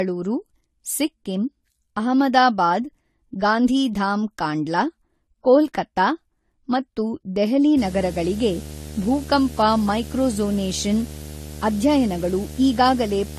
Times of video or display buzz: 7.77-13.38

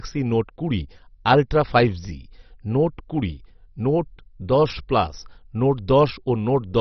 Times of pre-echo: none

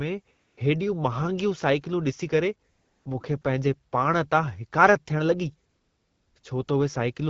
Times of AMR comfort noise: 0.35-0.57, 2.69-3.05, 3.41-3.43, 5.69-6.67

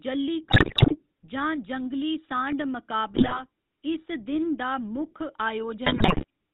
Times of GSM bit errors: 0.50-1.06, 3.14-3.42, 5.86-6.24

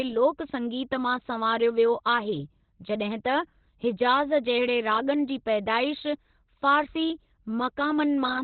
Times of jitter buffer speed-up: none

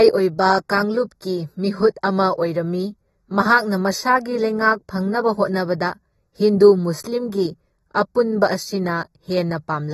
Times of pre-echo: none

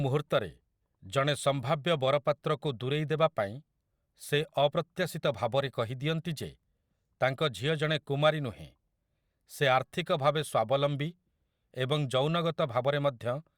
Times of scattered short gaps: none

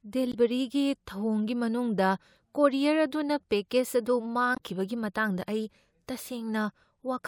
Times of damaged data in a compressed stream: 0.30-0.35, 4.53-4.60

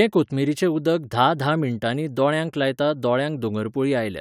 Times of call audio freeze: none

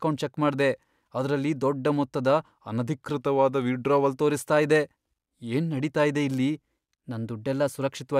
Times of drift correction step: 3.14-4.13, 6.73-7.99

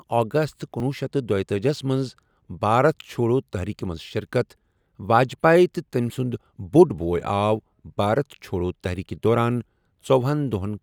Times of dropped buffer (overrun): 0.80

